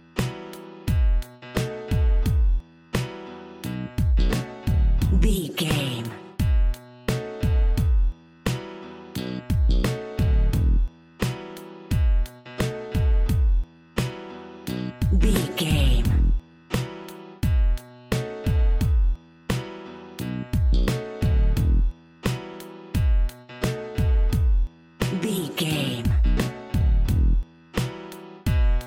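Nothing stood out on listening to this audio.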